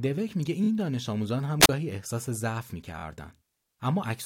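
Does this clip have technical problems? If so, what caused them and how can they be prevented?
Yes. Repeated frames occur twice, at 0.63 to 0.68 s and again at 2.97 to 3.02 s. Each time a single block of about 23.2 ms is played two extra times, giving a short stutter and adding 46.4 ms to the running time. The block length fits a 1024-sample codec frame at 44.1 kHz, which points to a fault in the writing or transmission stage. Prevention: use a muxer or streaming path that tracks frame sequence numbers and discards duplicates.

A wireless microphone squelch dropout runs from 1.60 to 1.69 s. The hiss rises as the radio link weakens, then the receiver's squelch closes and mutes the output for about 36 ms, leaving a short hole of near silence. When the signal recovers, the squelch reopens and the sound returns. The cause is a momentary loss of RF signal strength at the receiver. Prevention: improve the RF path with better antenna placement, line of sight, a clear frequency, or diversity reception.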